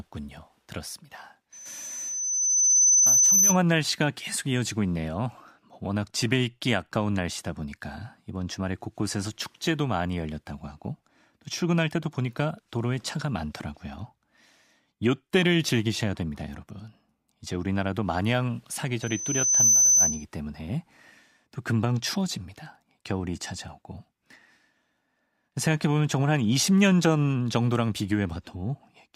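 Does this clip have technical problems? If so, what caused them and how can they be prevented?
Yes. Loudspeaker feedback squeal occurs at 1.52–3.58 s and 19.02–20.25 s. A 6.1 kHz tone swells within about 1.5 s and 0.7 s respectively to about 10 dB above the speech because the mic–speaker loop gain exceeds one there. To prevent it, lower the gain, separate the mic and speaker, or notch 6.1 kHz.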